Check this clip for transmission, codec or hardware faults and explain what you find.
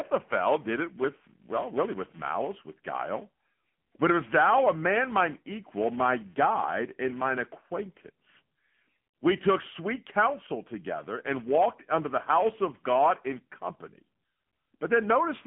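Two faults run through the whole speech clip.

Buffer tearing is present from start to end. The writing program and the hardware reader have slipped and cross inside every period. A small slice of each buffer, a few milliseconds old, is replayed with hard joins. This gives a robotic buzz near 345 Hz while speech plays, which fits a 128-sample buffer.

The AMR narrowband mobile codec also affects the entire clip. AMR-NB models the vocal tract and drives it with sparse pulses. The line passes only about 150 Hz to 3.4 kHz, and nothing is heard above 3.5 kHz. The damage is plainly audible as a buzzy, synthetic voice, which points to a low bitrate near 8 kbps.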